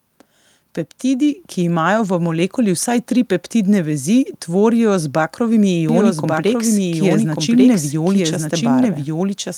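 At 1.38 s the microphone volume steps up by about 3 dB in a single jump. Speech and background noise rise together and stay there, which separates it from a compressor or gradual gain ride that would move the voice alone or glide.

From 5.89 s to the end there is a doubled audio track: a second full-band copy of the speech, roughly a second late and somewhat quieter, cuts in abruptly. Unlike an acoustic echo, it has no decay or room colour, likely from a duplicate capture path.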